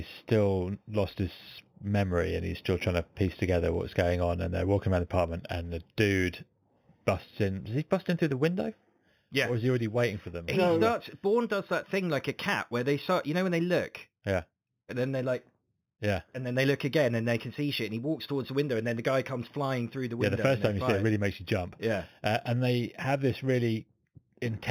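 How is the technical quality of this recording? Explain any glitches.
The recording has one fault that runs through the whole clip.

Imaging from linear upsampling is present from start to finish. The sound points to an 8 kHz source raised to 48 kHz by drawing straight lines between samples. That weak filtering leaves a mirrored copy of the 0 to 4 kHz band sitting at 4 to 8 kHz, roughly 25 dB down. It is heard as a faint metallic shimmer on sibilants over dulled top end. On a spectrogram, the speech pattern appears flipped and faded above 4 kHz.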